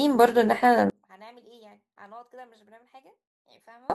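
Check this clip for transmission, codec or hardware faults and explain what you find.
One fault is present. From 0.9 s to 3.9 s the speech collapses when heard in mono, dropping by about 34 dB to a faint residue. The likely cause is one channel inverted: with one stereo side's polarity reversed, the shared centre content cancels on summing.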